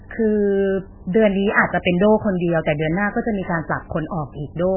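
Throughout the speech, the treble stops dead near 3.1 kHz and the remaining sound swirls and burbles as weak components blink in and out, heavy damage most likely from MP3 compression at a very low bitrate, around 8 kbps. A plain low-pass filter would dull the sound without this watery churning.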